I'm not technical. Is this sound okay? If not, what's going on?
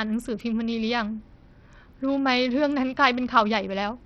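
No, the speech sounds gritty and dull the whole way through, with the crisp top end flickering out. That's likely heavy Bluetooth SBC compression squeezing it too hard.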